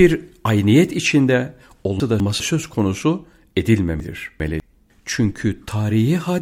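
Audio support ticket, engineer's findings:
Chunks out of order, 2.0–2.4 s and 4.0–4.6 s: 200 ms chunks played one and two chunks late, giving jumbled speech.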